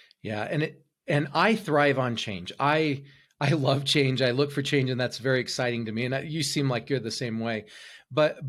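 No technical faults can be heard anywhere in the speech recording.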